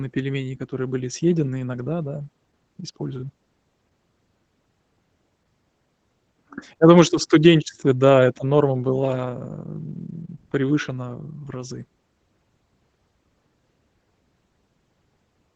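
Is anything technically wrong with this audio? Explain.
Yes. Opus voice compression runs throughout: SILK's linear-prediction coding, at what sounds like about 12 kbps, leaves the speech muffled and hoarse, with a spectrogram showing nothing above 9 kHz.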